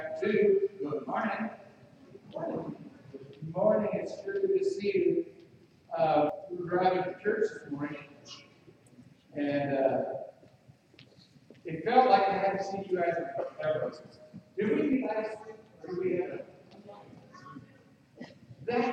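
At 6.30 s, compressed frames are skipped. Roughly 300 ms of sound is lost, which points to about three frames of 92.9 ms. At 14.93 s, about one frame goes missing.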